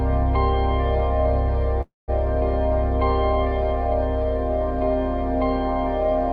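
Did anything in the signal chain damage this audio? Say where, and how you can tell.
Yes. From 1.81 to 2.10 s the music stops and a fading buzz fills the gap, dropping to about 180 ms of silence before resuming exactly where it left off, now 265 ms late. This call audio freeze was likely network stalling that emptied the jitter buffer.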